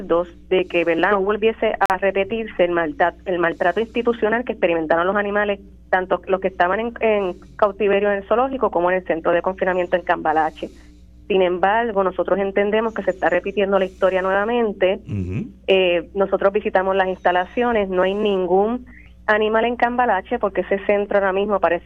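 A digital broadcast dropout mutes the audio from 1.86 to 1.95 s. About 43 ms of programme is lost, consistent with one failed frame.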